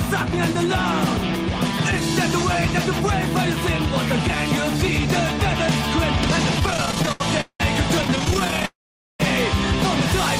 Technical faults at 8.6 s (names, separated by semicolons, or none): repeated stalls (stutter); call audio freeze